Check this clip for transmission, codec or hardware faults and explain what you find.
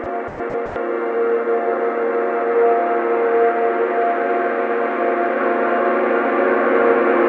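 Four short dropouts occur early in the clip: sound dropped by the voice detector at 0.04–0.06, 0.28–0.40, 0.50–0.54 and 0.66–0.76 s. The sound gives way to steady comfort noise, most likely because the sender's detector classed it as background. The band-limited audio, with nothing above 8 kHz, suggests a G.722 call codec.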